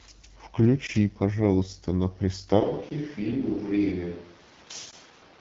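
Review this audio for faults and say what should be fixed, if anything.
The AMR wideband (HD Voice) codec runs throughout. A pulse-driven vocal tract model makes the speech rough and raspy, which fits a low rate near 8.85 kbit/s. On a spectrogram, energy stops at 7.8 kHz. Encode at 12.65 kbit/s or higher.

There is a gap between chunks at 0.87 s and again at 4.91 s. Each is a 20 ms hard-edged hole where chunk joins leave silence. On the waveform these appear as flat near-silent slivers. Play the chunks back to back without padding.

From 2.62 s to the end, there is a switch to a distant microphone. The sound turns roomy and hollow, and it is about 5 dB quieter. Room noise sits roughly 25 dB below the speech, likely because a farther microphone replaced the close one. A spectrogram shows less bass and a raised noise floor from that point. Monitor the close microphone so its failure is caught during recording.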